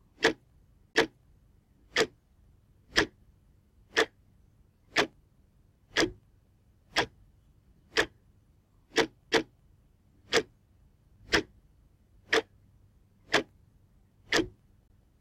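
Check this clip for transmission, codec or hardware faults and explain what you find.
Three CD skips are audible, at 0.93–0.95 s, at 9.31 s and at 14.88–14.90 s. In each, the laser loses its track and lands on a different turn of the disc's spiral, so the player briefly mutes and resumes from another point in the recording. Each is heard as a short tick or gap followed by a sudden discontinuity. The dropouts at 0.93 s and 14.88 s last about 20 ms; the one at 9.31 s is only a couple of milliseconds.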